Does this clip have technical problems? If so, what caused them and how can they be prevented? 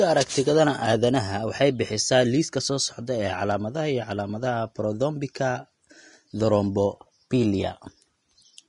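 Yes. Throughout the speech there's plainly audible Vorbis compression damage, and low-bitrate encoding is the likely cause: the top end stops dead around 10.6 kHz, and what treble survives sounds hissy and grainy rather than crisp. That's the codec quantising the fine high-frequency detail so coarsely it turns into noise of roughly the same energy, which also roughens the tone and softens consonant attacks. The damage fits something in the region of 34 kbps. Encode at a higher quality setting, or keep a lossless master, to avoid it.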